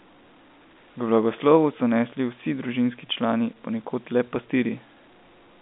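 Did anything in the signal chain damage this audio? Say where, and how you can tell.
No, nothing damaged this audio.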